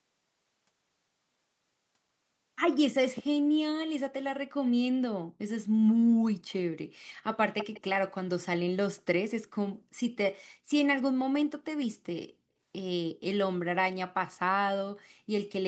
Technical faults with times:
7.58-7.81 echo leak

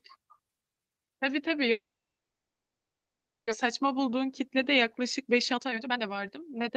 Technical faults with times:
1.71-3.53 long network dropout
3.65-6.68 jitter buffer speed-up

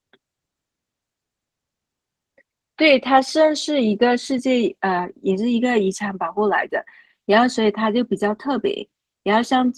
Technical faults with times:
0.00-9.78 Opus voice compression

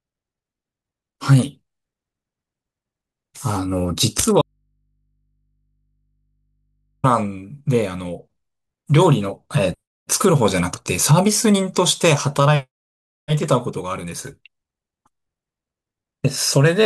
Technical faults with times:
4.42-7.04 audio dropout to a faint residue

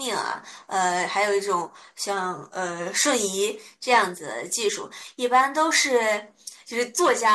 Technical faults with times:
4.68 compressed frames skipped

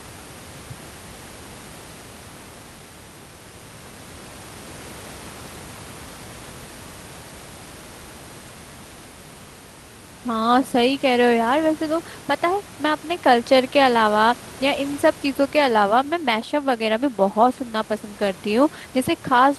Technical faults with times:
none

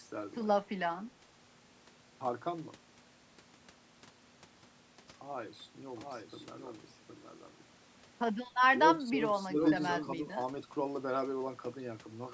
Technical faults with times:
0.64-0.70 speech suppressed in double talk
5.96-10.08 doubled audio track
9.02-9.20 speech suppressed in double talk
9.47-9.58 speech suppressed in double talk

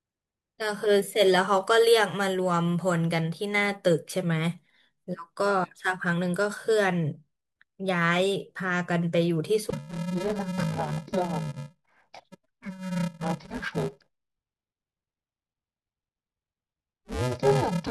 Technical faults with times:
9.70-17.90 interleaved audio read as planar

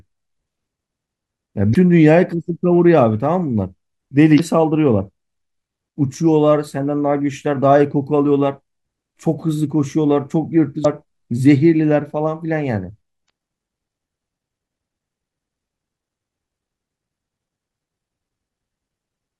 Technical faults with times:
1.72-1.76 damaged data in a compressed stream
4.36-4.40 damaged data in a compressed stream
10.81-10.85 damaged data in a compressed stream
13.26-13.30 damaged data in a compressed stream

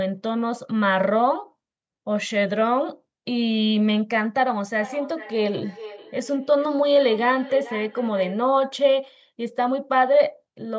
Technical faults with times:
4.80-8.44 feedback echo between two devices

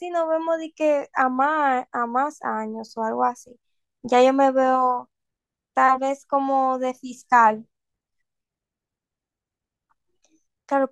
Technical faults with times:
none

